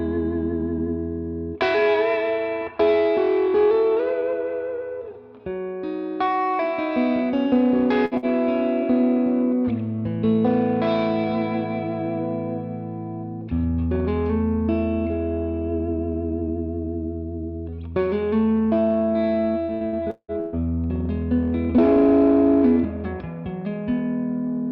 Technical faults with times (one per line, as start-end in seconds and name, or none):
8.05-8.25 burst of packet loss
19.62-20.55 repeated packet loss (robotic sound)